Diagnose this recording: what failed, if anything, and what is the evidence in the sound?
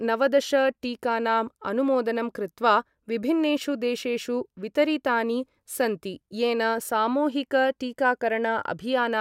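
Nothing failed in this recording, and the sound gives no evidence of a fault at any stage.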